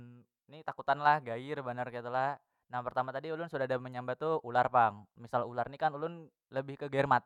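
No technical faults can be heard anywhere in this speech recording.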